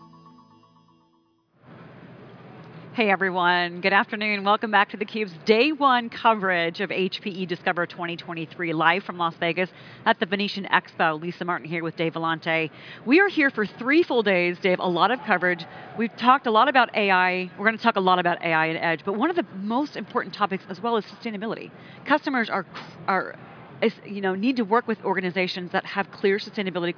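No technical faults occur at any point in the audio, so there is nothing to place in time order.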